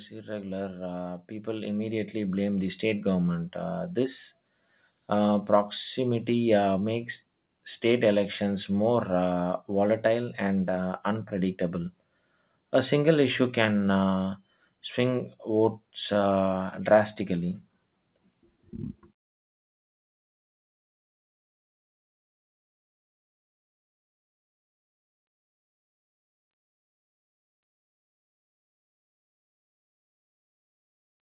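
From 0.24 to 3.11 s, speech and background swell together by about 9 dB: automatic gain rising, the control steadily lifting an input it judged too quiet.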